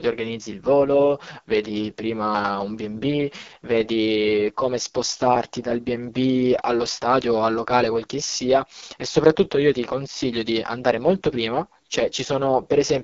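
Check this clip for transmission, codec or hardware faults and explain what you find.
Throughout the speech, the sound is rough and raspy with nothing above about 6.9 kHz. This points to AMR wideband (HD Voice) coding at its lowest rate, which fits 6.6 kbit/s: a sparse pulse-driven vocal tract model, with synthetic noise filling the top band.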